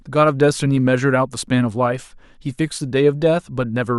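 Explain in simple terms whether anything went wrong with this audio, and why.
Something did go wrong, though it's tiny: at about 1.47 s in this speech clip there's a little skip in the sound. That's an overlap between stream segments. Two chunks of the stream were stamped as covering the same moment, so the player trimmed the supposed duplicate. That bit of sound wasn't actually repeated, though, so roughly 15 milliseconds just vanish and the waveform jumps, which you hear as the skip.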